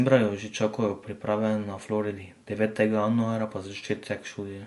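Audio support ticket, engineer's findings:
Speech, whole clip: watery, swirling texture, metallic chirps on s sounds, smeared onsets; no content above about 11.3 kHz. Likely MP3 compression, damage plainly audible; encoder starving for bits drops treble and weak spectral lines, pointing to roughly 48 kbps.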